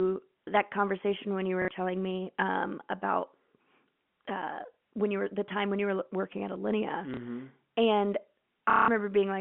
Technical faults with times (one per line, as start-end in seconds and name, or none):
1.62-1.68 packet loss with last packet repeated
4.74-4.77 packet loss with last packet repeated
7.14-7.17 packet loss with last packet repeated
8.70-8.88 packet loss with last packet repeated